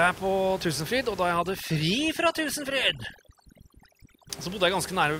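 Speech, with a stretch of overdone noise removal running from about 1.31 s to 4.30 s, starting just after "og da". Across that span the background, elsewhere room noise sitting about 17 dB below the speech, drops and breaks up into twinkling, warbling specks. The cause is a noise reduction stage set far too aggressively: it pulls individual frequency bands down or out whenever they approach its noise estimate, taking the quieter speech components along with the noise.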